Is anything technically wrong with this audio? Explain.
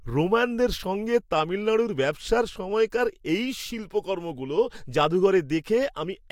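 No, nothing technically wrong can be heard in this speech recording. The signal stays continuous and steady throughout, with no audible faults to point to.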